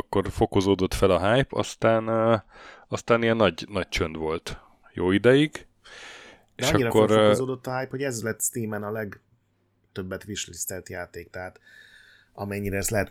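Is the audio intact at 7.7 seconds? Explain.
Yes, the speech at 7.7 seconds is intact, with no dropout, distortion or other fault to be heard at that moment.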